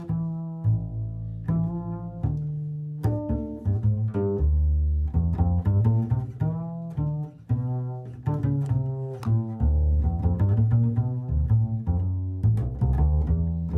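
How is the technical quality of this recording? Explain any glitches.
No glitches or technical faults can be heard here.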